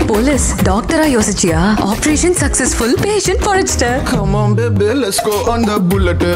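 Hard clipping runs throughout: peaks exceed the stage's limit by about 1 dB, so a tiny fraction are sliced flat, leaving squared-off waveform tops, faint vertical spectrogram streaks, and brief crackle.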